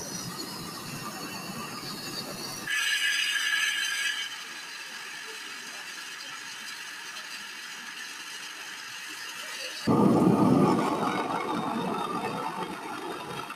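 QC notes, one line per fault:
Throughout: noise suppressor applied to music or sounds. A speech-oriented suppressor treats sustained tones, ambience and decay tails as noise and pulls them down by about 15 dB, while transients pass largely intact, so held material sinks and the sound pumps and thins between attacks.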